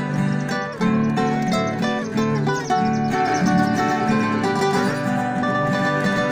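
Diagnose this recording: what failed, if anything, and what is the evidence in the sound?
Doubled audio track from 3.28 s to the end. At that point a second copy of the whole sound appears abruptly, trailing the original by roughly a tenth of a second at about the same level. It is full-band, with no decay or room colour, so it is a duplicate of the signal rather than an acoustic echo. The likely cause is the same signal being captured a second time through a slower routing or buffer path and summed with the direct feed.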